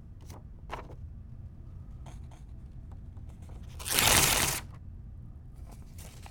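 A sound recording with a doubled audio track from 1.32 s to 4.78 s. During that span a second, full-band copy of the same material trails the original by roughly a third of a second, sitting a few dB below it. The copy has no decay or room colour, and it cuts in and out abruptly at both boundaries. The likely cause is a second capture of the signal through a slower path, or an edit that left two misaligned copies.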